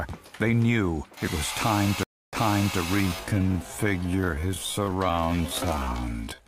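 A stream reconnect breaks the sound at 2.03 s: about 0.29 s of silence, then playback resumes 0.46 s earlier than where it stopped, so a short stretch repeats. That backward jump, with a muted or faded restart through 2.79 s, separates it from a plain dropout, which loses time instead of repeating it. From 2.94 s to the end the pace abruptly drops to 0.572 times speed with unchanged pitch. This is likely a time-stretched section, since a simple slowdown would also lower the pitch.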